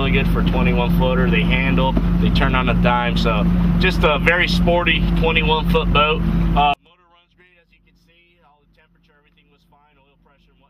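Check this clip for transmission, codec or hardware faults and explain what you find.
There's one fault here, and it's a big one. From 6.74 s to the end, the sound drops by about 39 dB and almost disappears, leaving only a faint trace. That's most likely one channel inverted: one side of the stereo pair has flipped polarity, so when the two are summed to mono, everything they share cancels out. What survives is just the small difference between the channels.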